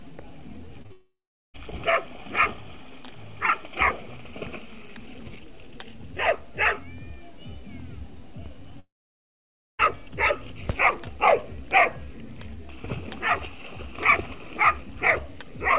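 Short concealed packet loss hits at 0.82 to 0.86 s and again at 0.86 to 0.92 s: roughly 20 ms and then 40 ms of audio arrived too late, and the decoder patched each gap by extending the preceding sound, leaving a brief smear or wobble. At 0.92 s a long network dropout, likely the cause of what follows, takes over. About 0.62 s is lost; the extrapolated buzz fades into roughly 0.4 s of silence before the audio resumes at 1.56 s with that stretch missing. A second long network dropout, likely from the same cause, runs from 8.80 to 9.81 s. There, about a full second goes missing, with only a short concealment tail before roughly 0.92 s of silence. Throughout, the G.711 A-law call path leaves nothing above 4 kHz.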